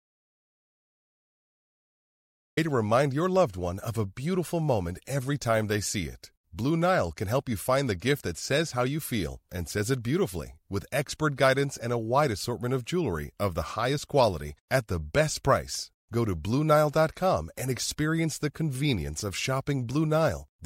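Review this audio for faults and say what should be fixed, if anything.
The speech opens on an audio dropout to silence: from 0.00 s to 2.57 s there is nothing at all, not even room tone, and the voice then enters abruptly mid-flow with "to remind your loved". A silent gap like this likely means the input signal was lost, through a disconnected device, a failed link or a mute, while recording carried on. Check connections and mute states, and monitor input levels before and during capture.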